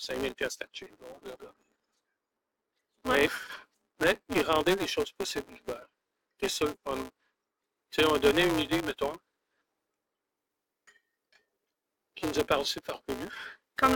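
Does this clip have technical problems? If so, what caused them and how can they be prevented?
Yes. Throughout the clip there is a buzz at 188 Hz that follows the level of the sound, the signature of a filter restarted on every block. The filter discards its memory at each block boundary and starts again from silence, so each block opens with a small transient, and these repeat at a rate that fits a 256-sample block. Unlike mains hum, which stays steady at 50 or 60 Hz, this buzz rises and falls with the signal. It is prevented by keeping each filter's state from one block to the next.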